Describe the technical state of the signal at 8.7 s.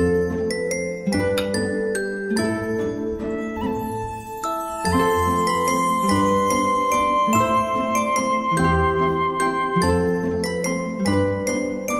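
At 8.7 s, sample clock jitter, present throughout, adds a faint hiss roughly 45 dB below the signal; on a spectrogram, a raised noise floor appears under loud, high-frequency content and vanishes in silence.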